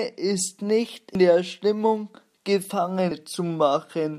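Compressed frames skipped at 1.15 s and again at 3.11 s: at each point the speech jumps forward, losing roughly 150 ms, which fits about two whole frames of around 85 ms each being dropped by the decoder or missing from the stream. At each join a small piece of the speech is simply absent.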